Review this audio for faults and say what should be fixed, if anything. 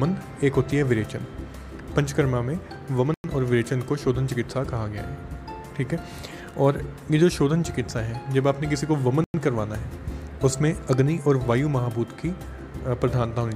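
There's a gap between chunks at 3.14 to 3.24 s and again at 9.24 to 9.34 s: two 100 ms holes, six seconds apart, where playback stops between 6-second chunks and picks up late without losing sound. Fix it by gaplessly queueing the next chunk before the current one ends and trimming any codec padding.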